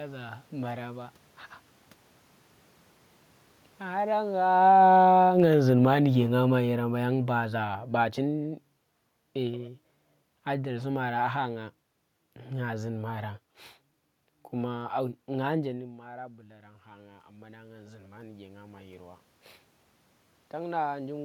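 From 3.86 to 8.5 s the automatic gain control responds to an input it judges too loud, with the talker coming closer around four and a half seconds, and lowers its gain by about 13 dB over nearly five seconds. This automatic gain falling makes the speech and the room noise sink together.

From 15.78 to 19.29 s the input drops by about 18 dB as the talker moves away just before, and the automatic gain control climbs about 10 dB. In this automatic gain rising, the speech and the room noise swell together over three and a half seconds.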